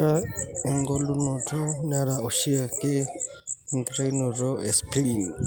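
Nothing to flag here, since the speech runs along without a single technical fault turning up anywhere in it.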